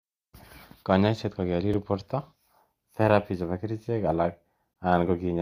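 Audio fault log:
1.73 s and 4.74 s, gap between stream segments: two hard-edged holes of silence cut into the speech, one about 4 ms long at 1.73 s and a longer one of about 19 ms at 4.74 s, just after "therapy chepo kerchek alak". The audio arrives in 1.0 s segments whose timestamps fail to meet, so the player pads each gap with silence. The speech is delayed, but none of it is lost.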